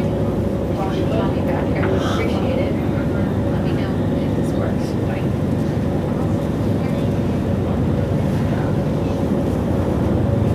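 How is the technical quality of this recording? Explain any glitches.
Wi-Fi interference runs from 3.16 s to the end. A nearby Wi-Fi radio's transmissions are rectified in the audio circuit, so its beacon every 102.4 ms becomes a faint, steady ticking about ten times a second, roughly 40 dB below the audio.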